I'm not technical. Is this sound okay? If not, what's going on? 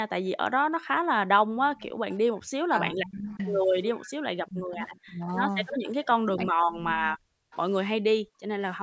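No, there are three problems, all from the echo control of a speakerphone call.

Background gated by the echo canceller: from 0.56 to 2.37 s, and again from 8.18 to 8.58 s, the room sound behind the speech drops away almost to silence. It happens for about a second in the first stretch. The echo canceller turned the microphone down hard while the loudspeaker played.

Echo leak: a faint, delayed copy of the speech comes back about a third of a second late. It is heard from 1.66 to 2.17 s, from 3.33 to 6.06 s, and briefly at 7.52 to 7.57 s. The likely cause is a speakerphone whose echo canceller did not remove everything its microphone picked up, so some was sent back.

Speech suppressed in double talk: between 2.65 and 7.29 s, the speech sinks sharply, loses its crispness or breaks off in pieces, for about two seconds in total. This is likely because both sides talked at once, and the canceller turned everything down.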